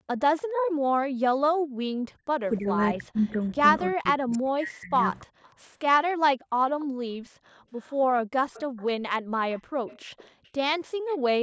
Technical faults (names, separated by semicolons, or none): echo leak; background gated by the echo canceller; speech suppressed in double talk